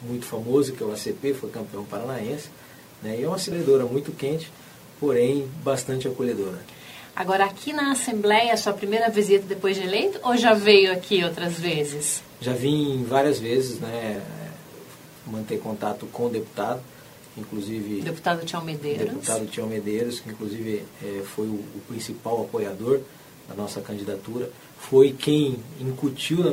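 At 3.51 s there is a brief glitch from damaged data in a compressed stream: corrupted bytes made the decoder misread frames and resynchronise.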